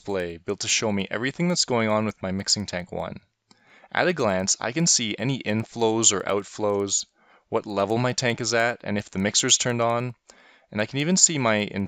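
Throughout the clip, the resampler restarted on every block. The sample-rate converter, which points to a conversion from 16 kHz up to 48 kHz, handled each 100 ms block in isolation, so at every block boundary it filled the missing neighbouring samples with the wrong values and left a small discontinuity there. The result is a steady ticking at 10 Hz, one tick per block edge, riding on the sound whenever signal is present and vanishing in the gaps.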